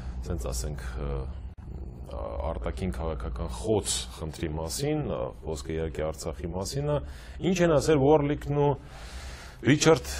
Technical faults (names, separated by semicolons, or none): gap at a join of encoded pieces